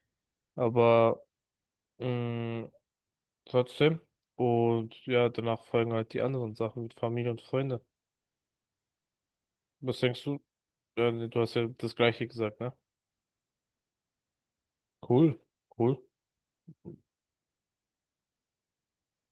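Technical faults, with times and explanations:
No technical faults heard.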